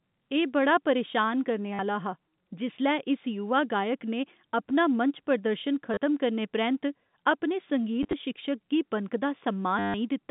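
Speech on a G.711 telephone line, band-limited to roughly 150 Hz to 3.7 kHz, has four short robotic stutters from packet loss with the last packet repeated. They fall at 1.74–1.79 s, 5.94–5.97 s, 8.03–8.13 s (scattered dropouts, longest run 30 ms) and 9.79–9.94 s. Each lost stretch is filled by replaying the previous packet. The runs buzz near 100 Hz, which fits 10 ms packets.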